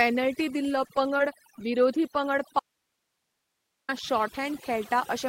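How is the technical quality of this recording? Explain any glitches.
Technical quality is poor: the speech is processed throughout, with brief glitches early on and one long cut-out.

For the whole clip, the background is near-silent and flecked with twinkling specks. That is overdone noise removal: the noise suppressor was set so aggressively that it shut down individual frequency bands near its noise estimate, taking quieter parts of the voice along with them.

Between 0.75 and 1.67 s, just before "विरोधी पंगड", there are a few ticks and smears. These are scattered short gaps: roughly three small holes, each around 20 ms or less, where packets went missing and the receiver filled in by stretching the preceding sound.

From 2.59 to 3.89 s, right after "विरोधी पंगड", the speech stops abruptly for about 1.3 s, leaving only hiss roughly 55 dB down. This is an audio dropout to a faint residue, likely a break in the signal feed while the downstream path stayed live.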